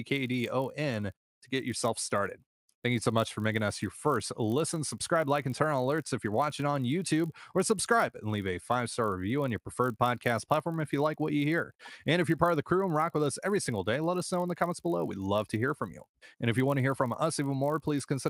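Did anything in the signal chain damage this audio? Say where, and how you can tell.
Yes. The damage is at the sample-rate conversion stage, where a resampler restarted on every block. Throughout the speech there is a faint 50 Hz buzz that sounds only while someone is talking. That rate matches 20 ms blocks, which fits a 24 kHz to 48 kHz converter losing its neighbouring samples at each block edge.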